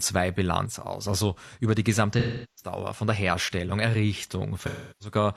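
From 0.66 to 1.06 s the speech drops abruptly by about 6 dB, then returns to its former level, with the sound otherwise unchanged. This is most likely one channel drops out: a stereo recording with the same signal in both channels lost one side for those 0.4 s, so the mono sum kept only half its amplitude.

From 2.13 to 2.72 s, between "über die" and "von der", the speech gives way to a synthetic fill-in instead of the real signal. The same happens again from 4.60 to 5.15 s. These are AAC frame loss with concealment. Compressed frames went missing, about 384 ms and 341 ms of audio, which fits roughly nine and eight frames. The decoder patched each gap by reusing the last good spectrum rather than leaving silence.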